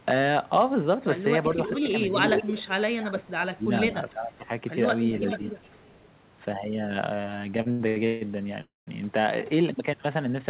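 From 1.66 to 1.92 s, 2.2 to 2.62 s and 5.18 to 6.09 s there is echo leak: a delayed copy of the talker, a steady 0.41 s behind the original. It sits about 10 dB down at first, then roughly as loud as the live speech, then about 15 dB down. The likely cause is a loudspeaker echo canceller that let its pickup through. The fixed delay is what marks it as echo rather than a glitch.

Overlapping this, speech suppressed in double talk dips the voice from 2.42 to 2.72 s, 2.93 to 3.65 s, 3.87 to 4.51 s and briefly at 5.37 to 5.42 s. The drops are roughly 15, 20, 15 and 5 dB. The voice is turned down, likely because the canceller is ducking both sides at once.

From 7.5 to 8.23 s, repeated stalls (stutter) break the flow six times. The longest hold is 149 ms, and about half that span is stretched filler, yet nothing is lost. The audio drags and catches, because the jitter buffer keeps running dry.

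At 8.61 to 8.89 s a single call audio freeze holds for 260 ms, fading to silence for about 180 ms before resuming where it left off. This one long gap, likely from packets delayed in transit, differs from the earlier string of short catches.

Throughout, nothing is heard above 4 kHz, which fits a narrowband G.711 call codec.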